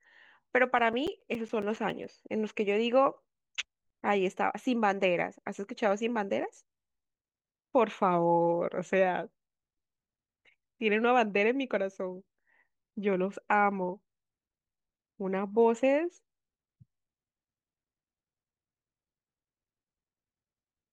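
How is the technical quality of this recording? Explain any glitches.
The speech carries one burst of CD scratch ticks, between about 0.65 and 2.04 s. A scratch on the disc wiped out more data than the error correction could rebuild, and the player patched over the damage once per revolution by interpolating or briefly muting samples. The result is eleven short ticks at a steady rate of roughly eight a second, of uneven strength, the longest around 10 ms.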